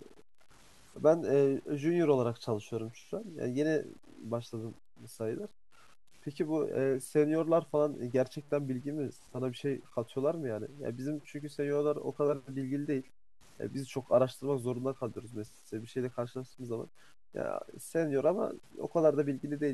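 It's a speech clip with grainy, signal-following distortion the whole way through, sitting roughly 30 dB under the voice, so quiet tails go gritty and sputter toward silence. That's low bit depth without dither, likely 8-bit truncation with no dither to decorrelate the error.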